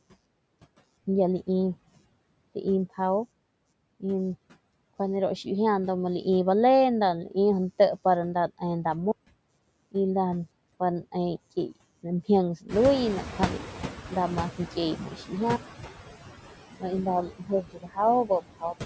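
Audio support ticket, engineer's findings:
Computer activity noise, throughout: buzzing pulse around 150 Hz, roughly 35 dB below the signal, rising and falling with machine load rather than with the speech. Probable component: shared audio ground disturbed by CPU, GPU or mouse current draw.

Noise suppressor artifacts, throughout: background pulled down about 20 dB, sinking in pauses and resurfacing under speech. Component: noise suppressor applying per-frame gain cuts to bands it classes as steady noise.

Playback stall, 9.11–9.49 s: output goes silent for 0.37 s mid-flow, then resumes. Likely cause: buffer underrun or blocked audio thread in the player. A second stall at 15.56–16.19 s shows the same signature, with a longer gap of 0.62 s before recovery.

Noise suppressor catching up, 12.68–15.19 s: room noise rises about 15 dB near 12.5 s, and the suppressor's noise estimate lags. Noise first passes with only about 11 dB reduction, then sinks as the estimate adapts over 2.51 s. 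Component: suppressor noise tracker.

Speech cut by the noise suppressor, in three spots. At 14.96–15.33 s, around 200 ms of speech is pulled down as much as about 14 dB. At 17.26–17.98 s, around half a second is cut by up to about 20 dB. At 18.25–18.74 s, around 150 ms is cut by up to about 19 dB. The affected speech sounds swallowed. Component: suppressor misclassifying low-level speech as noise.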